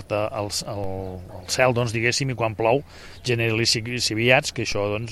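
Two low thumps land at 0.84 s and 4.72 s, each a brief dull knock under the sound, which carries on unchanged through both. These are DC steps: the waveform's zero line jumps suddenly, by about -24 dBFS, as happens when a converter recalibrates or an input carrying an offset is switched in. Each offset then drains away gradually, consistent with a high-pass around 2 Hz pulling the baseline back to centre.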